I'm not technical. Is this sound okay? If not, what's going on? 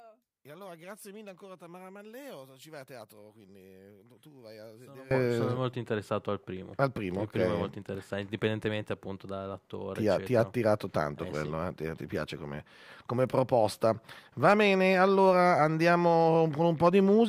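No. From the start to about 5.1 s, one stereo side was likely flipped upside down (one channel inverted), so the shared sound cancels and turns faint.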